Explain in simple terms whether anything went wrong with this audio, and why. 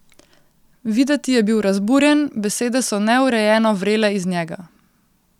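Nothing went wrong here: the speech signal arrives intact, with no technical faults anywhere in the recording.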